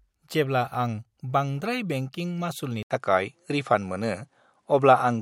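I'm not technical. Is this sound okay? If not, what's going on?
No. An input switched to a poorer device at 2.83 s, right after "बांद्राय बेंकिं मासुलनि", and lasts to the end. There's a brief gap of about 80 ms, then the sound turns duller because nothing above about 11.4 kHz comes through, the loudness shifts slightly, and a faint new background noise appears. The likely cause is the recording switching mid-way to a different, lower-quality microphone or headset.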